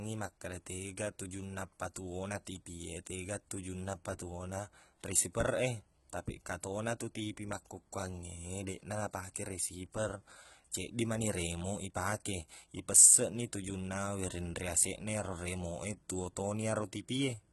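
All the way through, the speech has heavy HE-AAC compression damage, likely from a very low bitrate around 16 kbps: rebuilt treble sounds gritty and lispy, with nothing above 11.8 kHz.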